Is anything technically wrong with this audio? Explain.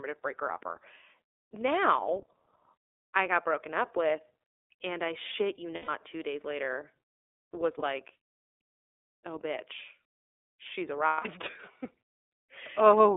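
Yes. The speech has been through the iLBC codec, and it also has three short gaps from lost iLBC frames.

The iLBC codec colours the whole clip. The band runs from about 300 Hz to 3.6 kHz, so everything above that is gone. Each frame's excitation is coded on its own without reference to the previous frame, and the damage is plainly audible as a rough, slightly synthetic texture. The behaviour points to iLBC's 30 ms frame mode, around 13.33 kbps.

Lost iLBC frames occur at 5.75 to 5.89 s (about 120 ms, which fits four 30 ms frames), at 7.79 to 7.83 s (30 ms, a single frame) and at 11.06 to 11.27 s (about 180 ms, roughly six frames). At each one the decoder fills the hole by repeating the last pitch cycle mixed with noise, fading across the longer gaps. This is heard as a held, buzzy or breathy vowel. The voice recovers almost immediately afterwards because each frame decodes independently.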